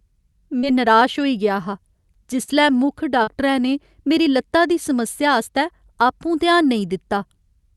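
Right at 0.59 to 0.66 s there's a short concealed packet loss: about 40 ms of audio never arrived, so the decoder papered over roughly 33 ms by extending the last sound, then crossfaded back. It comes across as a quick smear or wobble.

From 2.43 to 2.53 s you get a burst of packet loss, with several packets gone together. The receiver carries the last sound on for about 50 ms while fading it, giving a held buzz or dying hiss, then jumps ahead with a small chunk simply missing.

At 3.23 to 3.30 s there's another short concealed packet loss, again about 40 ms lost with roughly 37 ms filled in, heard as a brief smear or smudge. Underneath, the Opus call audio tops out around 12 kHz.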